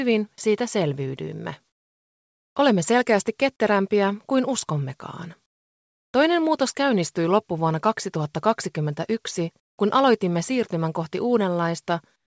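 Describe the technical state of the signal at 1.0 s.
At 1.0 s the signal is intact: it has passed through a WebRTC call path working normally, with nothing above 8 kHz, which fits a wideband G.722 codec.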